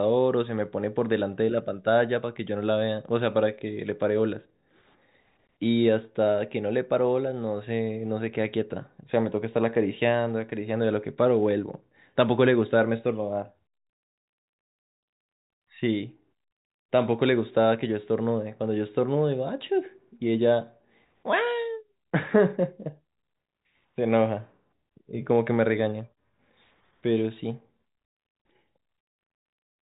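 Nothing stood out on listening to this speech, which comes through the telephone band with no audible content above about 3.8 kHz.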